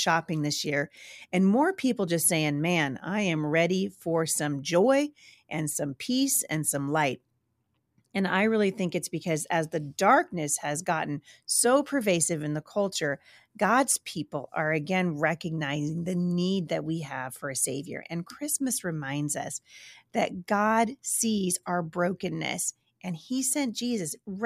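No technical faults can be heard anywhere in the recording; the signal runs continuously without any audible disturbance.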